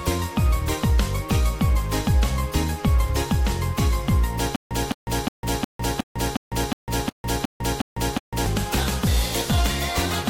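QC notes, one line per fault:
4.56 to 8.46 s, stutter with silent gaps: a 211 ms burst repeats 11 times, each followed by about 151 ms of digital silence, giving a steady 362 ms cycle. This likely comes from a stalled player or stream replaying its last fragment on each retry, so the intervening audio is lost.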